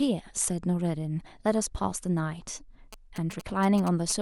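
From 2.93 s to 4.12 s, GSM signalling bursts break into the speech: a galloping dit-dit-dit of short buzzes at 216.7 Hz. A nearby 2G phone is sending brief groups of radio bursts while signalling, and the audio circuitry rectifies them into audible pulses, roughly 15 dB below the speech. A spectrogram shows vertical clicks and a comb of harmonics spaced about 217 Hz apart, and the waveform shows clustered rectangular bursts.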